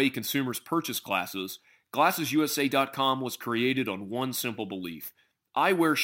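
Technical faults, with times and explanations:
Throughout, sample clock jitter. The converter's clock wanders by a few microseconds, so each sample is taken a little early or late. The timing slip causes a level error that grows with how steeply the waveform changes. Fast, loud parts of the speech carry the most error, and the pauses carry almost none. The error sits roughly 25 dB below the signal. It is heard as a hiss or roughness that follows the speech.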